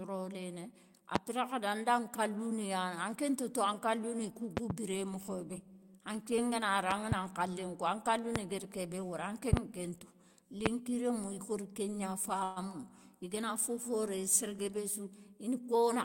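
Loud pops, some 20 to 25 dB above the speech, strike at 1.16–1.18 s, 4.57–4.73 s (a double, between "ni kou" and "biré mokhobé"), 6.91–7.14 s (double), 8.36–8.38 s, 9.53–9.60 s (double) and 10.66–10.68 s, just before "rémou ikori kégna". They are likely voltage steps from a plug, switch or static. The waveform shows tall spikes and the spectrogram shows full-band vertical lines over speech that continues underneath.

A call audio freeze follows "rémou ikori kégna" at 12.43–12.59 s. Delayed packets likely emptied the jitter buffer, and the last sound was stretched for 128 ms into a fading buzz. The spectrogram shows smeared, static harmonics. Nothing is lost, but the speech resumes 128 ms later.

A jitter buffer speed-up runs from 15.54 s to the end. Short pitch-period pieces, about 50 ms in all, are cut out, so the speech runs at 108% speed and sounds hurried. On the spectrogram the harmonic spacing stays the same while the syllables are compressed in time.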